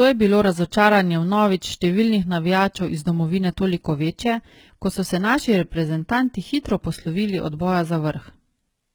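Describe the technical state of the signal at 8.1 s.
At 8.1 s the top end stops cold around 11.8 kHz, and the treble above the lower band sounds pasted on, giving the sibilants a gritty, lispy edge. That's likely HE-AAC compression rebuilding the highs by band replication, which fits a very low bitrate of around 16 kbps. There's also sample clock jitter running the whole way through: timing wobble of a few microseconds adds a rough hiss around 35 dB below the speech, loudest on bright, loud syllables.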